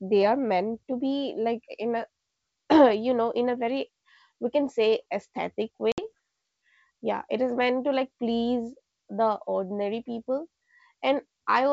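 Speech carried over G.722 wideband telephone coding suffers packet loss on an ADPCM call between 5.92 and 6.06 s. About 60 ms went missing, enough to suggest several lost packets. The decoder's adaptive predictor and step size then drifted from the sender's, so a hard-edged silent hole gives way to briefly, slightly distorted speech.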